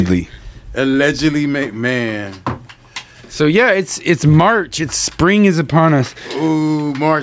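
All the way through there's gain pumping: the level swings by roughly 10 dB, so the whole thing sounds squashed and breathing. The likely cause is input gain set far too high, with a fast limiter clamping down on each peak.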